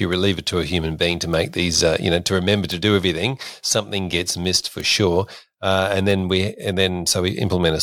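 Four bit error spikes tick through the speech at 1.33, 2.72, 4.80 and 6.11 s, peaking around -15, -9, -9 and -15 dBFS. Each is a flipped bit that jumps one or two samples and snaps back, so it is a bare, broadband tick unrelated to the signal, unlike a mouth click.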